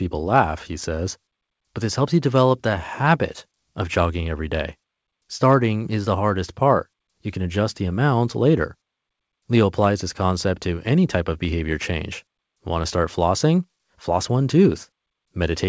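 Nothing goes wrong anywhere in the speech here; it just sounds like a wideband call, with nothing above 8 kHz.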